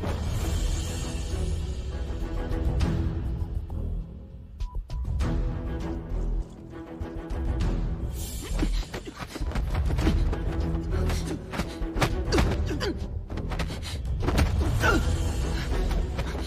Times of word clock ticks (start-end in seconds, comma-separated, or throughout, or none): none